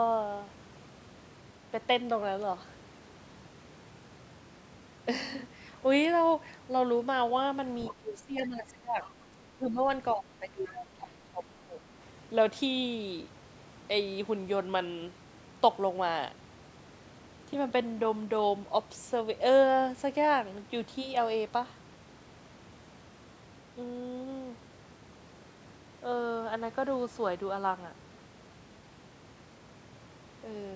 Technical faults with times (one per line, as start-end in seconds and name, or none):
7.85-7.91 other side's voice leaking through
7.90-9.84 speech suppressed in double talk
10.15-11.81 speech suppressed in double talk
10.67-10.73 other side's voice leaking through